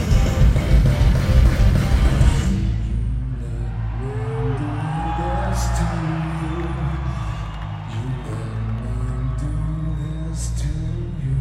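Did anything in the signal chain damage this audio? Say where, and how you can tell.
Yes, at the driver or buffer stage, most likely clock drift buffer slips. About seven regular clicks occur from 0.85 s to 10.11 s, every 1.32 s. The timing fits a clock mismatch near 150 ppm, each slip dropping or repeating a handful of samples.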